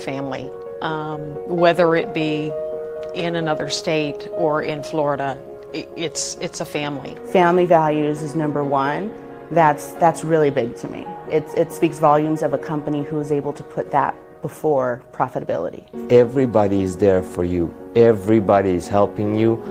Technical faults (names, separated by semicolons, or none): none